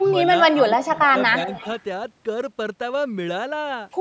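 Speech suppressed in double talk occurs at 0.0 to 0.16 s, 0.6 to 1.15 s and 1.46 to 1.5 s. The voice dips by about 15 dB at first, about 10 dB through the longest stretch and about 5 dB at the end. The likely cause is an echo canceller that took talk from both sides at once for echo and turned it down.

An echo leak follows from 1.5 to 1.82 s. A faint copy of the voice trails 291 ms behind, about 20 dB below the speech. This is likely loudspeaker sound that the microphone on the loudspeaker side picked up and its canceller failed to remove before sending it back.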